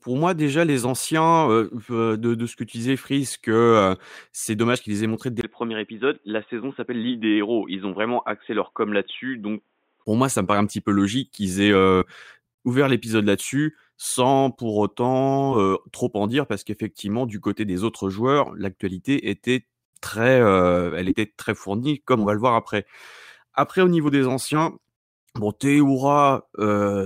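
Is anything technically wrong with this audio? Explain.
Yes. From 5.41 to 10.06 s, just after "qu'ils aient montré dès", the speech turns dull and boxy, with nothing above 3.8 kHz, then clears again before "moi ça me paraît". A 20 ms gap marks the switch, the level barely changes, and faint new background noise sits far below the voice. This is likely an input switched to a poorer device, such as a headset call profile whose narrow band cuts off the upper frequencies.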